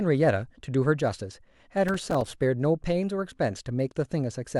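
From 1.88 to 2.31 s, processor overload crackle tears through the speech: roughly fifteen missed buffers of about 3 ms each drop to silence, leaving gritty, hard-edged gaps.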